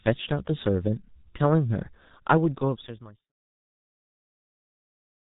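From start to finish the speech carries heavy G.723.1 codec damage: nothing gets through above 3.8 kHz, and the slow-updating voice model leaves it muffled and hoarse with smeared consonants, which fits a very low rate near 6 kbit/s. The clean fade-out from about 2 s to 3.33 s carries the same dull tone.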